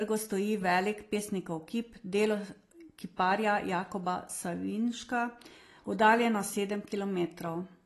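From start to finish the speech sounds dull and smeared, with nothing above 12.1 kHz and a fizzy, warbling texture on sibilants and held vowels. The likely cause is AAC compression, with AAC-LC quantising the spectrum so coarsely that high bands drop out and the remaining detail turns grainy, which fits a low bitrate around 32 kbps. A simple low-pass filter would remove the top just as cleanly but leave no swirling artefacts below the cut-off.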